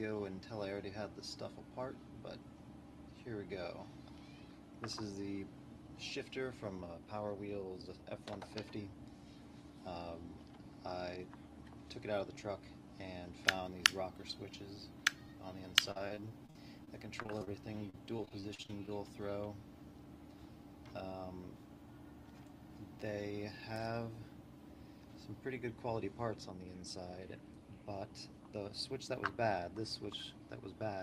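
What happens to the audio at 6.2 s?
Nothing goes wrong at 6.2 s: the audio is intact there and carries only the ordinary character of the call codec path it passes through.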